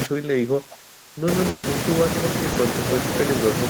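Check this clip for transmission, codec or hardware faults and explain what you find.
Three faults are audible, all in the speech itself.

From 0.05 to 1.28 s the talker's level sinks and recovers unevenly, dropping by roughly 25 dB at its deepest so that parts thin out or break into fragments across most of the opening stretch. This is likely speech suppressed in double talk. With both ends talking together, the echo canceller couldn't tell this voice apart from the returning loudspeaker echo, so it attenuated everything it heard.

Between 1.49 and 1.65 s the sound stops moving forward and the last sound hangs, fading, for about 140 ms before the speech picks up again further along, with that portion gone. This is a burst of packet loss. Several consecutive packets arrived too late or not at all, and the receiver stretched the last received sound over the hole while ramping it down, so nothing in between survives.

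At 2.53 to 2.57 s there is a brief smear, a momentary wobble lasting around 20 ms that briefly blurs the speech. This is short concealed packet loss. A tiny slice of the stream missed its playout deadline, and the decoder patched it by extending the preceding sound, following its pitch or substituting shaped noise, then crossfading back into the genuine audio once packets resumed.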